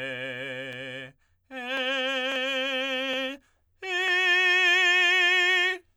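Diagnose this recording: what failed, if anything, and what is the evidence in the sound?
Nothing failed; no faults heard.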